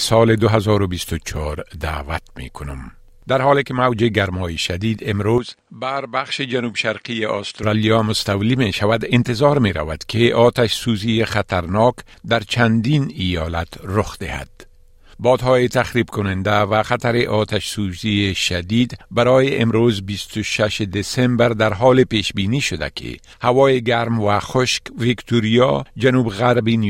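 From 5.38 to 7.63 s the sound turns duller and drops about 5 dB, with a faint new noise floor, likely an input switched to a poorer device. On a spectrogram, energy above 9.7 kHz vanishes abruptly, with no silent gap at the switch.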